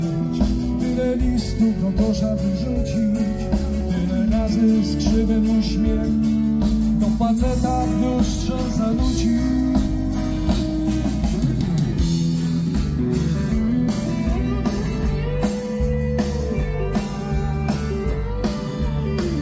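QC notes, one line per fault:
No technical faults can be heard anywhere in the signal.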